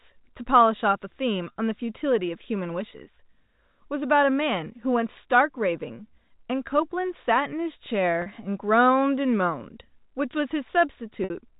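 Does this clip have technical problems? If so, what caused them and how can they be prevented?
Yes. Packet loss with pitch repetition occurs at 1.52 s and 8.22 s (40 ms each) and at 11.24 s (60 ms), which fits two or three lost 20 ms packets. The receiver repeats the last pitch period to bridge each gap, producing a brief, slightly buzzy held tone. Forward error correction, a deeper jitter buffer or a less congested network path would prevent these dropouts.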